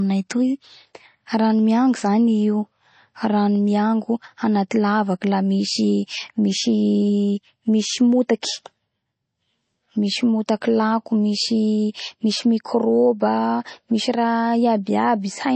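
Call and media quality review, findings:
Whole clip: dull, band-limited speech with nothing above 8.3 kHz, plus a plainly audible watery, swirly texture on s sounds. Likely MP3 compression; the encoder is starved of bits, which fits a low bitrate around 32 kbps, so it drops the treble and weak spectral lines.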